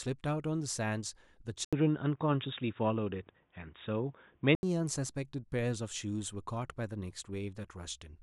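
Speech clip, and at 1.65 s an 80 ms gap drops the sound into a dull, boxy band with nothing above 3.8 kHz, a few dB of level shift and faint new hiss, clearing at 4.63 s. That's likely an input switched to a poorer device.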